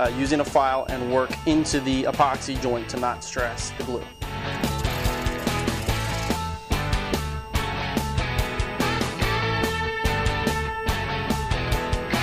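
A switching supply whistle runs through the entire clip: a thin, high tone wandering between about 2.72 and 2.85 kHz, sitting roughly 25 dB below the wanted audio. A switch-mode power supply in the chain is cycling at an audible rate, either in a light-load burst mode or beating against another supply, and that switching leaks into the signal path. As the load on the supply shifts, the whistle's pitch drifts within that narrow band.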